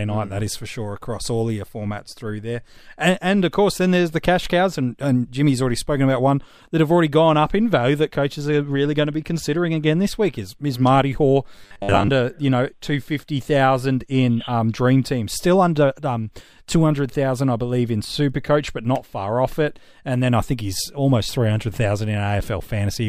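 From 11.56 to 12.10 s, just before "you know two fifty", the speech turns into robotic sound from repeated short buffers: a rigid, metallic buzz locked at 100 Hz that still roughly tracks the syllables. The likely cause is audio arriving too slowly, with the playback filling each gap by looping the last 10 ms, so about half of this stretch is repeated material and the rest is original audio. Unlike a pitch-shift or vocoder effect, the buzz holds one fixed pitch regardless of the talker's natural intonation.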